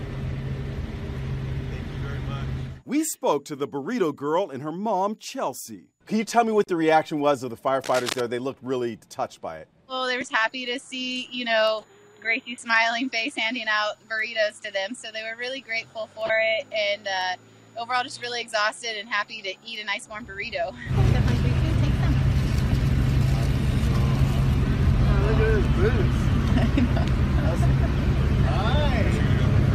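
From 7.84 to 8.21 s, cable scratch noise, likely from a shifting worn connector, adds ragged crackle about 10 dB down, shown as broadband speckled spikes.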